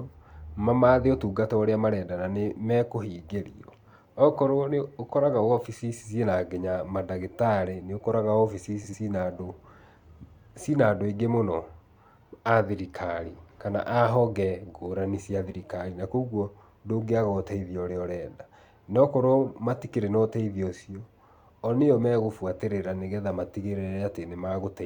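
Speech clip with two short spots of frames out of order, at 8.83–8.94 s and 15.50–15.54 s. Neighbouring blocks of about 46 ms and 36 ms swap places, which fits two-frame runs. You get a quick garbled flutter, though no time goes missing.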